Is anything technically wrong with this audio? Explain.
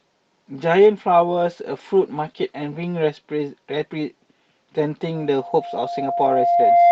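Yes, there are two separate faults in this speech clip.

From 0.73 s to 3.65 s there is a call bitrate drop. The call's bandwidth estimate fell, so the encoder halved its rate from 32 kbps to 16 kbps. It stayed at the lower rate for about 2.1 s. With fewer bits the Opus coding becomes coarser, and the audio band shrinks from 12 kHz to 8 kHz, so the speech sounds duller and grainier. Unlike packet loss, nothing drops out or stutters. It clears once the rate recovers.

From 5.15 s to the end there is a loudspeaker feedback squeal. The microphone is picking up the loudspeaker it feeds, and at 694 Hz the loop gain exceeds one, so that frequency reinforces itself on every pass. It swells over roughly two seconds until it sits about 10 dB above the speech. Its steady growth sets it apart from a constant test tone or mains hum. Hum would sit at a low fixed frequency and stay level, but this tone keeps building.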